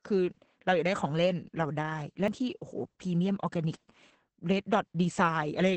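Throughout this speech clip the sound is muffled, hoarse and slightly robotic, with nothing above about 8.4 kHz. That is heavy Opus voice compression: the SILK linear-prediction coder in wideband mode, working at what sounds like a bitrate of roughly 10 kbps, codes the excitation coarsely. At 2.28 s a tick and a momentary mute are followed by an abrupt jump in the audio. This is a CD skip, where the laser lost its track and resumed on a different turn of the disc's spiral.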